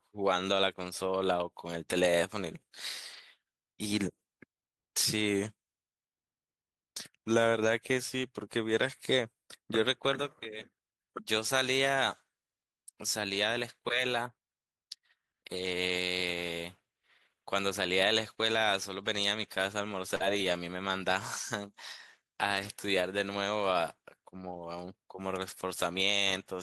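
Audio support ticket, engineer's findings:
Lost packets rebuilt from error correction at 3.13–3.19 s, 20.20–20.30 s, 22.55–22.69 s and 24.51–24.69 s. Short rough, noisy patches with no gap, about 40, 60, 80 and 100 ms long. The lengths fit runs of 20 ms packets, growing longer through the clip. The component is the Opus decoder's in-band forward error correction. The next packet carried a low-bitrate copy of each lost one, and that coarser copy was played in its place.

Burst of packet loss at 20.15–20.22 s, running straight into the rebuilt patch at 20.20 s. The receiver concealed the dropout by extending the last sound for about 47 ms while fading it, giving a brief held buzz or hiss. Audio then resumes further on, with about 40 ms of the original skipped. The component is the receiver's packet loss concealment. Several consecutive packets were lost or arrived too late, and error correction could not recover them.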